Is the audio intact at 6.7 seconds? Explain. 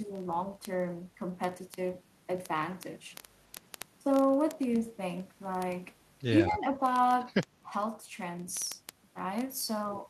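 No. Two faults overlap at that moment. Word clock ticks run from 0.11 s to the end of the clip. A digital link is being read by a device on its own clock, not locked to the sender's, with a mismatch on the order of a tenth of a percent. Each time the two clocks drift a full sample apart, the receiver misreads a few samples, which fits one sample being dropped or repeated per slip. Around 6.7 s this is still heard as a steady train of sharp ticks, one roughly every 30 ms, laid over the speech.

Speech suppressed in double talk covers 6.44 s to 6.77 s. The likely cause is the echo canceller hearing both sides at once and being unable to tell the local talker from the loudspeaker echo, so it turned the local signal down as well. The speech dips by about 5 dB for roughly a third of a second, so at 6.7 s it sounds pulled back before recovering just after.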